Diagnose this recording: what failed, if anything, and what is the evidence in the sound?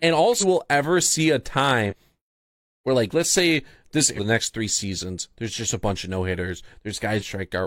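Codec-stage damaged data in the compressed stream: short glitches at 0.38, 1.86, 4.14 and 7.16 s, where the decoder loses frame sync and hunts for the next header.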